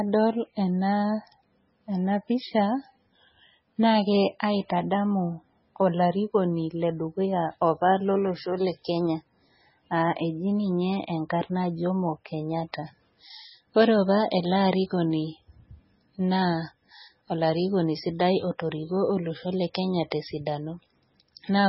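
From start to finish the speech carries heavy MP3 compression damage, likely from encoding at a very low bitrate; the sound fits something near 16 kbps. Nothing survives above 5.6 kHz, so s sounds lose their top, and the remaining band turns watery and swirly as weak frequency lines drop in and out from frame to frame. That flickering, metallic churn separates it from a plain low-pass filter, which would dull the treble but leave the rest steady.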